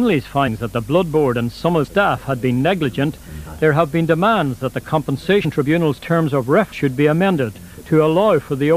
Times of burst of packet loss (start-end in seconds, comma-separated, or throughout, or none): none